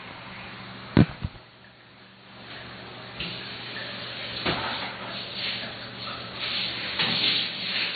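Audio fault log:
Throughout: MP3 compression. The audio has no content above about 4.6 kHz, and the missing treble leaves it dull and boxed-in. Across the whole clip there is a clearly audible watery, swirling texture, and transients sound smeared rather than crisp. The likely cause is a heavily starved MP3 encode, with damage of this degree pointing to a bitrate around 24 kbps. Short of bits, the encoder cut the top band at a fixed frequency and zeroed weaker spectral lines. Those lines then flicker in and out from frame to frame, producing the swirl.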